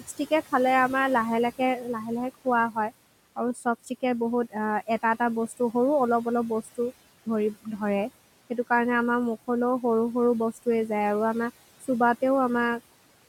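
From the start, noise suppressor artifacts pump the room noise down by about 17 dB between phrases; the spectrogram shows patchy, flickering speckles in the gaps. Speech cut by the noise suppressor follows at 1.58–2.92 s, 3.36–4.03 s and 7.26–7.81 s, where parts of the speech drop by about 15, 14 and 18 dB, shaving roughly 300, 200 and 100 ms of speech. These show as abruptly thinned waveform edges and missing energy.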